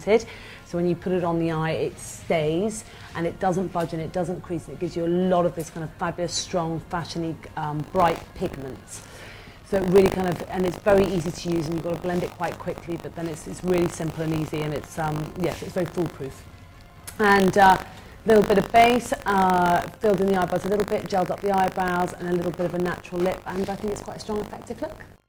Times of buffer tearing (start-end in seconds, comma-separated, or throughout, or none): 7.78-25.28